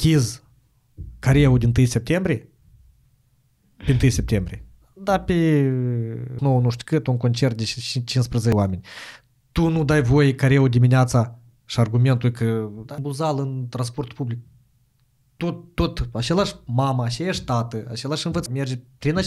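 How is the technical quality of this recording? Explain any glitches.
The recording has damaged data in a compressed stream at 6.39, 8.52, 12.98, 15.40 and 18.46 s: corrupted bytes make the decoder lose frame sync and resynchronise, producing short chirps or blips.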